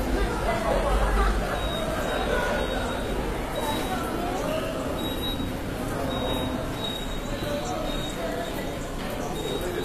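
Everyday sounds, with HE-AAC compression plainly audible throughout: the upper band is present up to about 14.9 kHz, then nothing, but it sounds gritty and metallic rather than dull. That rebuilt treble, copied up from lower bands, likely comes from HE-AAC at a rate fitting 24 kbps, and it sets the fault apart from a simple low-pass cut.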